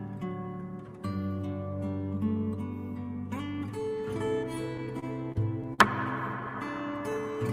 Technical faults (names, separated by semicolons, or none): repeated stalls (stutter); jitter buffer slow-down